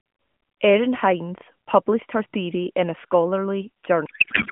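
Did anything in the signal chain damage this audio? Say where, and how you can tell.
Yes, at the codec stage: from 4.06 s to 4.52 s a codec payload misread, fitting octet-aligned AMR unpacked as bandwidth-efficient, turns the speech into garbled warble with smeared, structureless spectrogram bands.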